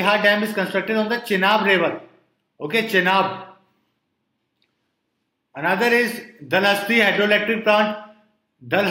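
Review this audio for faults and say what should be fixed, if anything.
Nothing here needs fixing. No faults can be heard anywhere in the recording.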